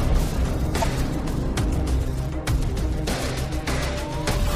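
A short audio clip with damaged data in a compressed stream, heard twice. Brief glitches of about 40 ms break in at 0.80 to 0.84 s and 4.43 to 4.47 s. Corrupted bytes make the decoder misread frames, lose sync and resume at the next frame header.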